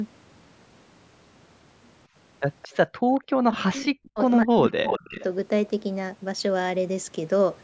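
At 2.62 to 2.68 s a brief echo leak appears: a faint delayed copy of the speech, roughly 25 dB below the direct voice, trailing it by 223 ms. It is likely the far end's echo canceller failing to fully remove what its loudspeaker fed back into the microphone, so a residue was returned down the line. A second, fainter scrap of the same echo, still at 223 ms delay and around 30 dB down, is heard at 3.15 to 3.2 s.

Between those two, at 2.99 to 3.03 s, the background is gated by the echo canceller. For about 40 ms the room sound drops out, by about 38 dB at its deepest, because the canceller clamped the microphone while the loudspeaker was active. The ambience then snaps back once the canceller releases.

From 3.5 to 4.19 s the speech is suppressed in double talk, with about 0.7 s affected and dips of around 40 dB. With both sides talking at once, the canceller likely could not tell the local talker from loudspeaker echo and attenuated everything, so the voice dips. 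The same happens again from 4.43 to 5.19 s, with about half a second affected.

Overlapping that second suppression, a much stronger echo leak runs from 4.84 to 5.24 s. It trails by 306 ms and sits only a few dB below the speech. Throughout the clip the call's microphone processing band-limits the audio, with nothing above 8 kHz.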